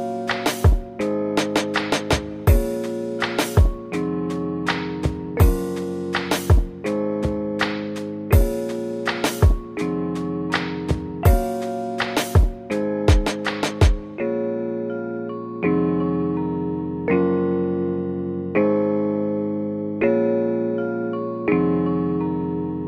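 Nothing here stands out as a fault at any point along the way, so there's nothing to flag.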